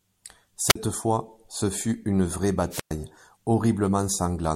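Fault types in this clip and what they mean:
Wireless microphone squelch dropout: the radio link fades until the receiver's squelch mutes the speech, leaving near-silent holes of 45 and 113 ms rather than digital packet-loss gaps.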